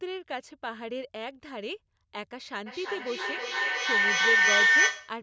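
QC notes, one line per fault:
2.66 s to the end (5.23 s), feedback howl: a tone around 2 kHz takes over and climbs to about 12 dB above the speech, throbbing roughly every 300 ms. Two devices in the same room are clearly on this call, so the mic keeps picking up its own loudspeaker and each pass comes back louder. The loop favours that one band, hence the narrow whistle, and it never stops because nobody breaks the loop before the clip ends.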